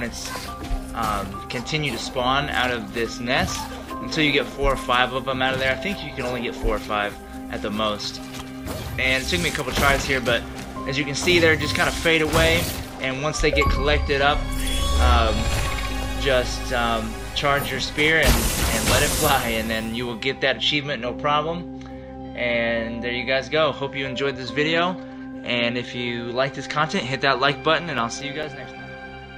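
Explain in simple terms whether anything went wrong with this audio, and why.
Near the end, from 27.54 to 28.88 s, seven regular CD scratch ticks occur: a damaged disc spot loses data each rotation, and the player patches over it.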